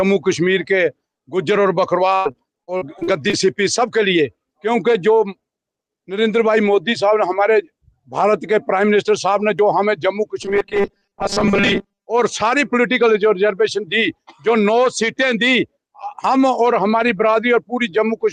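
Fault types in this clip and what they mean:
Repeated packet loss (robotic sound): From 2.15 to 3.35 s the sound turns choppy, with seven separate holes in quick succession, the longest about 98 ms. Each hole is papered over by stretching out the sound just before it, so roughly 280 ms of real audio goes missing while about 275 ms of patched-in filler takes its place, close to a quarter of that stretch.
Robotic sound from repeated short buffers: Between 10.43 and 12.07 s the audio collapses into a rigid, mechanical buzz pitched at 200 Hz that only loosely tracks the underlying sound. The likely cause is audio arriving too seldom, with the player looping a very short slice, which at 200 Hz fits a repeat every 5 ms, while the real material between refills is skipped. Most of this stretch is made of those repeats.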